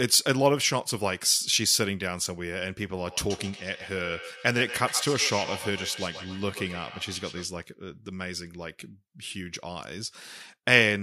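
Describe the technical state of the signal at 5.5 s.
At 5.5 s the speech sits inside a stretch of feedback echo between two devices running from 3.05 to 7.58 s. A second device in the same room is replaying this talker's audio, and this microphone captures it again. Its echo canceller only removes its own playback, so the replayed sound passes through. Each syllable returns roughly every 150 ms, thinner and ringing, peaking about 12 dB below the direct speech.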